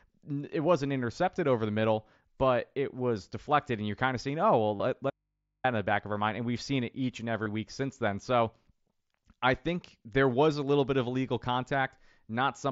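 At 1.80 s, just after "wasn't intercepted over the", there is a brief concealed Bluetooth headset packet loss. About 15 ms of audio went missing between headset and phone. The receiver filled it by repeating a closely matching slice of the preceding waveform. At 4.77 to 4.80 s, after "of seeing oh well", a longer 37.5 ms loss is covered the same way. Here the patch sounds like a short buzzy tone held at full level, with a slight warble as real sound resumes.

From 5.10 to 5.64 s comes an audio dropout to a faint residue. The signal vanishes abruptly for about 540 ms. Only low mains hum remains, roughly 55 dB below the signal. The onset is a hard cut, not a fade or a pause. The likely cause is the signal path breaking while the input stage stayed live. Sound returns with "in the back of".

At 7.43 to 7.46 s, a third packet loss of 30 ms is again bridged by repeated waveform. It gives a brief buzzy hold and a small warble at the join. 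Throughout, the mSBC headset codec's light graininess on louder passages can be heard.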